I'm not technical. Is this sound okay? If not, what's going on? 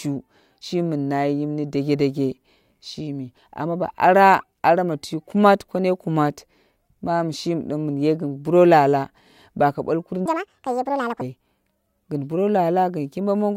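No. There's a section at the wrong speed from 10.26 to 11.21 s. The speech there plays about 1.79 times too fast, so it sounds hurried and nearly an octave higher, likely because that stretch was played back against the wrong clock.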